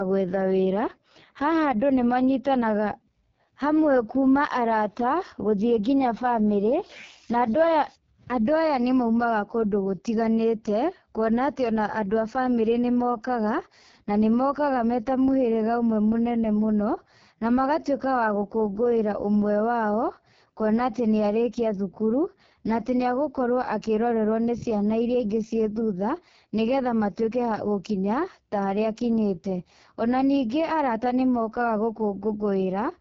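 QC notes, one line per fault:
Throughout: AMR wideband (HD Voice) codec damage, heavy. The speech sounds rough and raspy, as expected at the lowest rate, which fits roughly 6.6 kbit/s. The band stops near 7.5 kHz with a noise-filled band from 6.4 to 7 kHz, unlike narrowband's sharper, duller cutoff.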